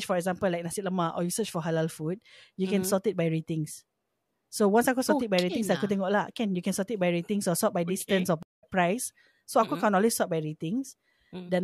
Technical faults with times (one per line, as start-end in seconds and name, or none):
8.43-8.64 stream reconnect